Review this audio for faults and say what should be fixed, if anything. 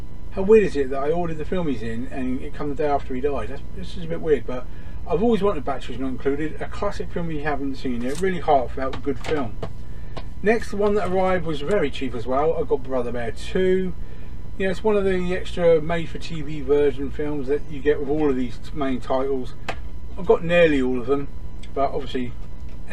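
At 9.59 s there is a repeated buffer: new audio arrived late, so the device played its last block once more. The block lasts about 1.33 ms, which fits a 64-sample buffer, so the repeat is a single click rather than a stutter, and a millisecond or two of audio is lost. A waveform shows a short segment duplicated with a hard step at the join, and a spectrogram shows a thin vertical broadband line. A larger buffer or higher-priority audio thread would prevent it.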